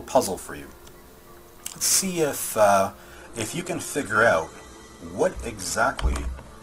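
At 3.15 s the sound switches abruptly to a lower-quality rendition and stays there to the end. That's an adaptive stream dropping to a lower bitrate: the connection slowed, so the player swapped versions mid-play without any gap. The codec artefacts climb, and the top end is cut off, with nothing above 12.2 kHz. The character fits a step down from Opus at about 64 kbit/s to about 16 kbit/s.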